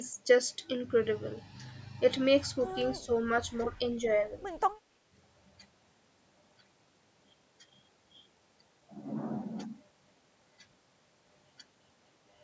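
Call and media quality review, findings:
Speech dip at 2.99–3.1 s, roughly a tenth of a second, level down roughly 10 dB. Likely speech suppressed in double talk: echo canceller misread overlapping far-end audio as echo and attenuated the near talker too. Distinct from a dropout or packet loss, which leaves a hard gap or artefacts. Here the sound ducks. Call microphone processing path present: content stops near 8 kHz.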